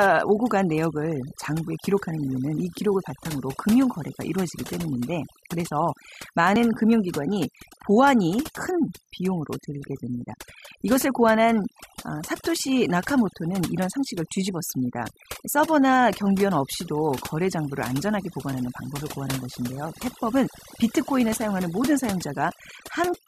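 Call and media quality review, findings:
Overdone noise removal, whole clip: background dropped and broken up into twinkly specks. Denoiser set way too hard, killing single bands near its noise estimate and taking quiet bits of the voice with them.

Overlap between stream segments: small clicks or micro-skips at 2.58, 6.56, 12.56 and 18.53 s. Spacing fits 2 s segment boundaries. Timestamps overlap, player trims real audio, and a few ms vanish, so the waveform jumps.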